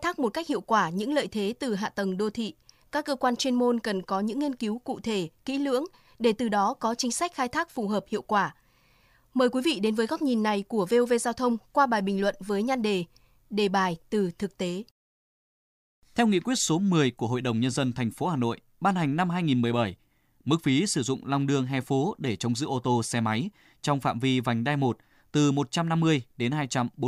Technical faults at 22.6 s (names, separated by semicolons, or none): none